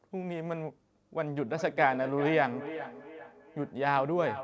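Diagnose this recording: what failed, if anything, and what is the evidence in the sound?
Feedback echo between two devices, at the call processing stage. From 1.24 s on, the speech comes back roughly every 0.4 s, ringier each pass, peaking about 11 dB below the direct sound. Another device in the room replays the call, the mic picks it up, and the echo canceller only removes its own playback.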